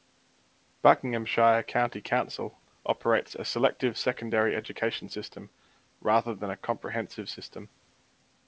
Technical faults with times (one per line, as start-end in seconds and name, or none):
none